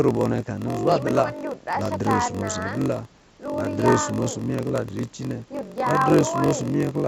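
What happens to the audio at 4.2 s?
At 4.2 s you're hearing the block size mismatch (padded) that runs through the whole clip, so nothing special starts or stops there. One stage hands over shorter blocks than the next stage reads, and the shortfall in each block is filled with zeros. That leaves a tiny silent gap in every block, which comes across as a steady buzz at about 46.9 Hz riding on the speech. The speech also plays slower, at 0.938 times normal speed, while the timbre stays roughly where it should be. That rate and slowdown fit a 1024-sample read being fed blocks of about 960 samples.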